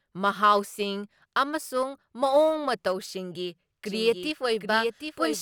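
At 3.86 s a doubled audio track kicks in and runs to the end: a second, full-band copy of the speech trails around 0.7 s behind, a few dB quieter, with no room tail, and it starts abruptly. Likely a slower capture path mixing in a second time.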